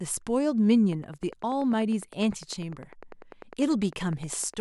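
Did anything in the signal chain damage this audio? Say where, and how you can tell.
Yes. A train of clicks runs from 0.93 s to 4.55 s: about forty evenly spaced ticks at 10 per second, peaking roughly as loud as the speech and audible in the pauses too. The cause is likely electrical interference coupling into the analogue wiring, or a faulty connection or power supply.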